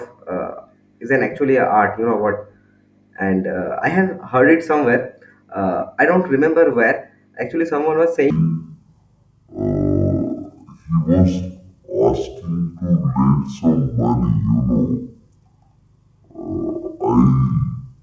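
From 8.3 s to the end, the audio is played back at half the rate it was captured at, with no conversion between the two, a wrong sample rate fault that fits 32 kHz material being clocked out at 16 kHz. Because each sample is held twice as long, time and pitch stretch together: the speech slows to half speed and drops a full octave, 12 semitones, turning low, heavy and drawn out.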